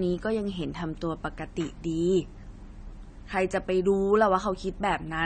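From the very start and all the way through, the speech sounds dull and smeared. Nothing comes through above 9 kHz, so sibilants lose their air and turn fizzy and watery, with a warble on held sounds. That's the signature of AAC compression, likely AAC-LC squeezed to a low bitrate, around 32 kbps by the sound of it. The encoder drops the top band and starves the rest of bits, leaving the damage plainly audible.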